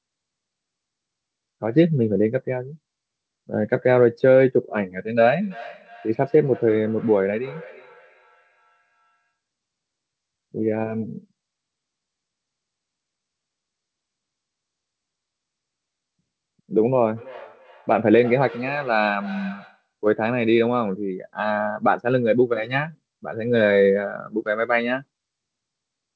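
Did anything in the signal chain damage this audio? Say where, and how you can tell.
Yes. There is feedback echo between two devices, arising at the call-processing stage, from 5.39 to 9.32 s and again from 17.15 to 19.88 s. Each phrase returns at a steady interval of roughly a third of a second, peaking at about 21 dB and 20 dB below the speech, and every pass sounds thinner and more ringing. Room reverberation would smear continuously rather than repeat at a fixed spacing. A single failed echo canceller would give one delayed copy, not a copy that thins and rings as it comes round. Here, a second device's loudspeaker feeds the first microphone, and that device's canceller cannot remove sound it did not play.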